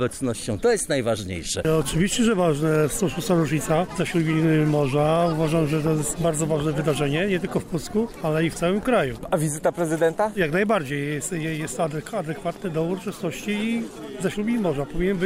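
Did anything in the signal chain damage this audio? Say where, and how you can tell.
Yes. At 2.75 s there is an electrical switching spike: a sharp snap sitting on top of the sound, likely picked up in the analogue wiring from a nearby switch or discharge. On the waveform it is a narrow, steep transient; a spectrogram shows a thin full-band vertical stripe.

From 3.65 to 4.98 s there is channel delay (comb filtering). One channel trails the other by a tiny offset, which fits about a one-sample slip in the driver or buffer, before mono summing. The first cancellation falls near 20 kHz, so the top sounds dulled. A spectrogram shows a fixed dark notch near the top of the band.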